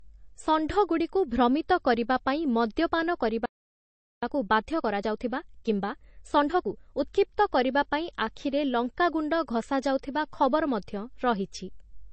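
Throughout the speech there is nothing above 8.3 kHz, with smeared, swirly detail. This is likely low-bitrate audio saved at a high bitrate, consistent with a 32 kbit/s MP3 re-encoded at 320 kbit/s.

After "ଭ୍ରମିତ କରିବା ପାଇଁ ମଦ୍ୟପାନ", the audio cuts to silence from 3.46 to 4.23 s, about 0.77 s. This playback stall was probably caused by the player running out of buffered data.

From 4.23 to 7.23 s, a time-compressed catch-up plays the backlog at 1.25× speed without a pitch change. It sounds hurried and ends before "କରିବା ପାଇଁ ଆଖିରେ ଲଙ୍କାଗୁଣ୍ଡ".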